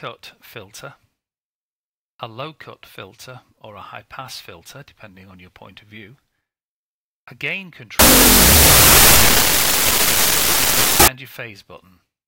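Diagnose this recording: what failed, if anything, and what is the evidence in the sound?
Sample-format conversion, 7.99 to 11.08 s: wrong sample width, 32-bit float read as 16-bit integer. Loud noise fills the spectrogram; sound plays half speed, octave lower.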